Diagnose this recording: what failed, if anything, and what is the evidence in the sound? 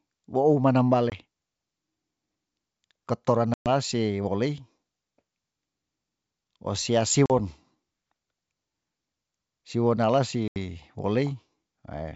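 Packet loss on an ADPCM call, at the network stage: silent holes at 1.10 s after "wou manam" (20 ms), 3.54 s before "se wolei" (120 ms), 7.26 s (40 ms) and 10.48 s (80 ms). Each resumes slightly distorted while the decoder's predictor and step size re-converge with the sender's.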